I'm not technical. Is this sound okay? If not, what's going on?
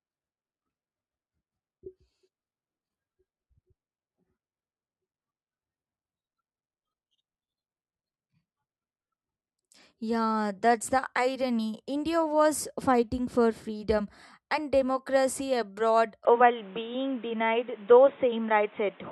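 No. Input switched to a poorer device at about 16.25 s, right after "freedom and democracy abroad", lasting to the end. The voice suddenly turns dull and boxy because nothing above about 3.8 kHz gets through anymore, the level shifts noticeably, and a faint new background noise appears, with no gap at the change. The likely cause is the recording quietly moving to a lower-quality microphone, such as a headset in call mode.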